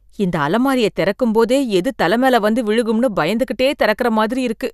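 No technical faults can be heard in this recording.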